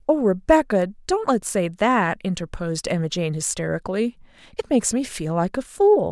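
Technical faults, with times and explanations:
0.82 s and 2.91 s: bit error spikes. A single sample jumps to about -23 dBFS and snaps back. Each is one sharp, broadband tick unrelated to the speech.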